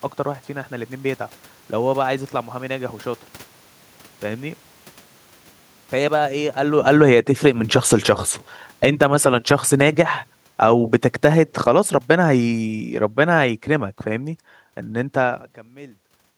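Speech, with automatic gain falling twice. From 5.96 to 9.25 s the level slides down by about 16 dB, and from 10.47 to 15.51 s it drops by about another 8 dB, as the gain control judges the input too loud or its background noise too strong and eases back. The talker also shifts position around 6.5 s and 15 s, but the gain fault is distinguished by the room noise sinking along with the voice instead of holding steady.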